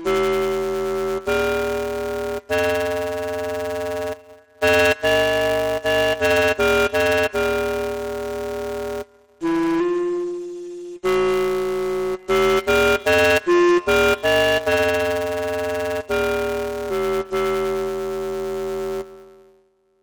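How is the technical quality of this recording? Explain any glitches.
The recording has one fault throughout: planar audio read as interleaved. Blocks of about 5.8 ms, which fits 256-sample planar blocks, are read as alternating pairs, producing a robotic buzz at 172 Hz with no octave shift.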